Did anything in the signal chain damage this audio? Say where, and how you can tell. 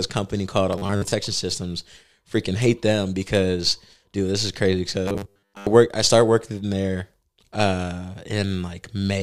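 Yes, the buffer stage. Robotic sound from repeated short buffers at 0.73–1.12 s, after "company called", and 5.08–5.67 s, before "work I started working". A rigid 100 Hz buzz rides the speech, likely a 10 ms chunk replayed while new audio arrives late.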